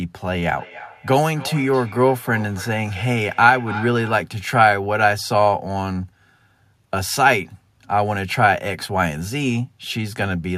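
From 0.32 to 4.32 s the speech is shadowed by a thin, ringing repeat that trails each phrase by roughly a third of a second, peaking at about 16 dB below the speech. This is feedback echo between two devices. A second device on the same call plays back what this microphone sent, and the microphone captures it again. The local echo canceller only removes its own playback, so the loop returns at that fixed interval.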